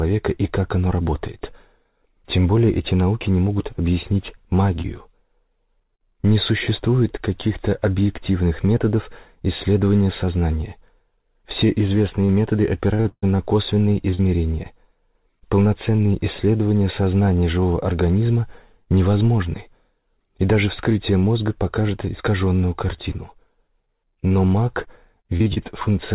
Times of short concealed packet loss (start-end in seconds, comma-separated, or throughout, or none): 4.82-4.86, 5.96-6.01, 14.10-14.20